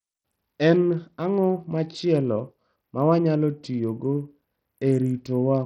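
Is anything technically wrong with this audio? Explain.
Yes. Throughout the speech, the sound was likely squeezed through Bluetooth SBC compression at a very low bit allocation, consistent with roughly 64 kbps. SBC divides the signal into a handful of wide sub-bands and shares a small bit pool among them without modelling hearing, so the weak upper bands are starved and the rest coarsely quantised. The damage is heavy: treble drops out and flickers, while a gritty, aliased roughness clings to the speech.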